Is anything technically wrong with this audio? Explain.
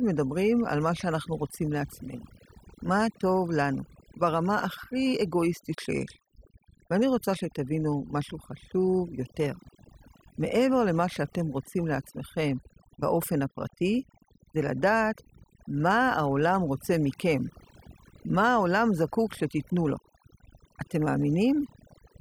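Yes. Throughout the speech, overdone noise removal leaves the background lower but sprinkled with twinkling specks. Bands near the estimated noise floor are cut deeply, taking quiet voice detail too. A noise gate would instead mute everything at once between phrases.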